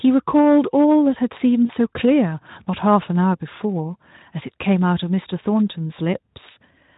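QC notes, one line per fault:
1.65–1.71 s, VoIP packet loss concealed by the speech codec: about 40 ms went missing, fitting two 20 ms frames, and the decoder stretched its last pitch and filter into a fading buzzy tone or coloured noise. The spectrogram shows flat, smeared harmonics; the waveform shows a decaying envelope.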